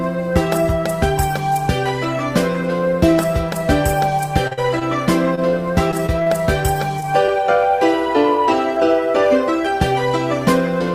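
At 4.47 s comes a short concealed packet loss, followed at 4.53 s by a second one that runs to 4.59 s. Each dropped about 20 ms of audio that never reached the decoder in time. The receiver covered the holes with 35 ms and 43 ms of synthesized continuation, carrying on the preceding sound either from its pitch or as shaped noise, then crossfading back into real audio. Delay shifts by around 15 to 20 ms. The result is a brief smear across this stretch.

Two short stalls from a late packet follow, at 4.79 to 4.83 s and at 5.35 to 5.39 s. In each, the jitter buffer ran dry while waiting for the next packet, so the decoder stretched the last sound by 18 ms and then 23 ms before resuming at the same point. No audio is lost. What you hear is a sound held slightly too long, with a momentary buzz or dip.

From 5.91 to 6.32 s, repeated packet loss (robotic sound) sets in. Four gaps fall within about 0.4 s, the longest 36 ms. 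Together they remove 40 ms of audio, with 80 ms of concealment filling the holes, so roughly a fifth of the span is synthesized. Because each patch is followed closely by the next hole, the passage comes out choppy, with fragments missing.

Two more short concealed packet losses occur at 7.00 to 7.04 s and 7.26 to 7.30 s. Each drops about 20 ms, filled with 19 ms and 18 ms of concealment, and each produces a brief smear at the join.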